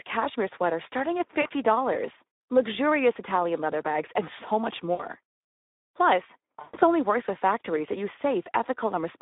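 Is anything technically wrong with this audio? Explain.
Yes. The whole clip runs through the Speex codec at what sounds like about 11 kbps on a narrow telephone line, roughly 250 Hz to 3.7 kHz. The damage is plainly audible. With that few bits the CELP coder can't model the excitation properly, so the speech comes out hoarse and noisy and lacks any real top end. It's the familiar older VoIP and game chat sound.

There are also three spots of VoIP packet loss concealed by the speech codec. At 1.41 to 1.48 s, right after "cashmere sweaters starting at", about 40 ms goes missing. At 4.93 to 5.07 s, after "bags and so much", about 60 ms is lost. At 6.61 to 6.84 s, just before "only works with factories", roughly 140 ms drops out across about 200 ms, the longest run being about 120 ms. Each time the decoder keeps replaying its last pitch and filter at falling gain, so you hear a smeared buzzy tone or coloured noise that fades, and the voice stays weak for a moment after the audio comes back.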